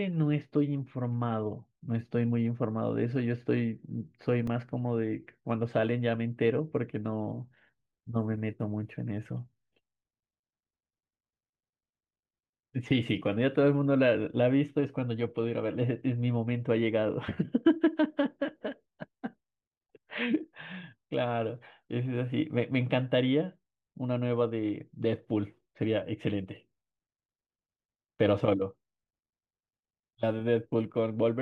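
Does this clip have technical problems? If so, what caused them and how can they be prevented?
Yes. The speech has a block of digital silence at 4.47 s, lasting about 1.3 ms. It is short enough to be heard as a single tick rather than a gap: the waveform drops straight to silence and back with no fade, so both edges produce a sharp discontinuity. The duration fits one 64-sample buffer that was not filled in time and was output as zeros. To prevent it, give the audio thread enough processing headroom or a larger buffer so it never misses its deadline.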